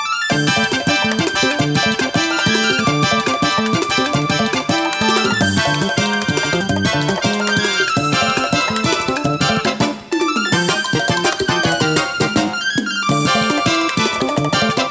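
Throughout, a wrong sample rate doubles the speed and lifts the pitch 12 semitones, which fits 8 kHz audio played at 16 kHz; spectrogram bands sit an octave higher.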